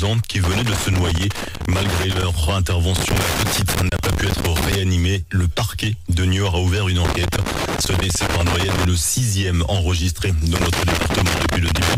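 Four bursts of loose connector crackle break up the audio, at 0.44–2.24 s, 2.96–4.75 s, 7.05–8.85 s, and from 10.55 s to the end. Each burst is an irregular scratching in which the signal is repeatedly chopped as a worn or dirty contact makes and loses connection. Unlike evenly spaced digital clicks or steady surface noise, the crackle arrives in ragged clusters and actually interrupts the signal.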